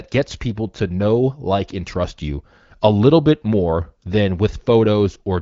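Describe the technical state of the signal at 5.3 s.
At 5.3 s the speech is intact, with no fault at that moment, and it comes through the AMR wideband (HD Voice) codec with its band-limited top end.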